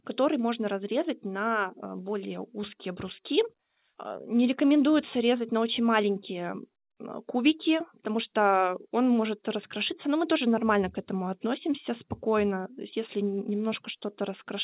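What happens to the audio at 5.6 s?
Nothing goes wrong at 5.6 s: the speech continues intact, heard through the call path's narrow telephone band with nothing above 4 kHz.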